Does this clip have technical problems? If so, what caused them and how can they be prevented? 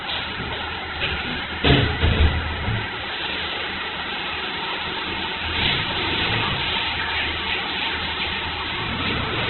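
Yes. Throughout, the sound is grainy and rough, with nothing above about 4.1 kHz. This is likely Opus compression at a very low rate, around 8 kbps. A spectrogram shows a hard ceiling and noise-filled bands. Prevent it by encoding at a higher bitrate.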